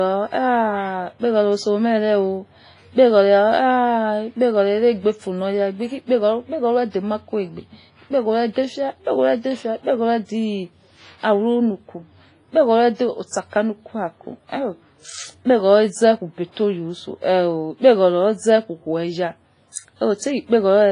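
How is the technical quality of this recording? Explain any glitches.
The speech is heavily degraded throughout by coarse compression, with one audible smear near the end.

WMA compression, throughout: the sound is washy and ringing, with hiss that breathes along with the speech and nothing above 10.4 kHz. This is likely a WMA transform codec at a low bitrate, around 24 kbps, zeroing weak detail.

Pre-echo, 19.72 to 19.76 s: about 40 ms of hiss arrives just before an attack and softens it. The codec spread quantisation noise across its whole block, filling the quiet moment ahead of the onset.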